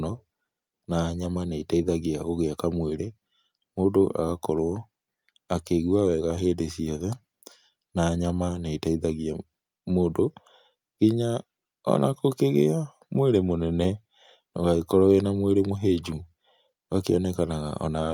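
No technical faults are audible anywhere in the speech recording.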